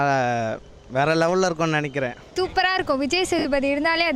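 Lost LE Audio frames, 3.39–3.45 s: the LC3 decoder filled the 60 ms gap, which fits six frames, by repeating the last spectrum with random signs, producing a noisy smear.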